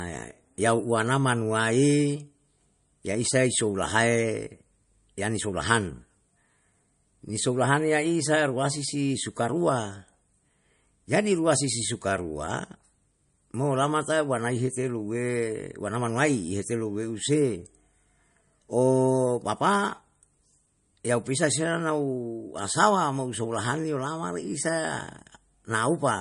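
From start to finish the speech sounds watery and swirly, with metallic chirping on s sounds, softened consonant attacks, and nothing above about 10.6 kHz. This is plainly audible damage, likely from MP3 compression at a low bitrate around 40 kbps. Short of bits, the encoder cut the treble at a fixed point and dropped weak frequency lines that flicker on and off between frames, leaving the swirl and chirps behind.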